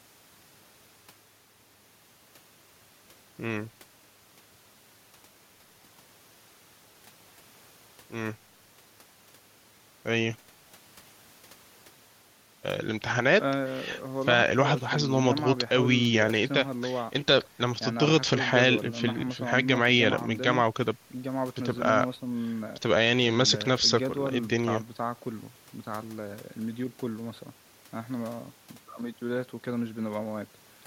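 No technical faults are audible.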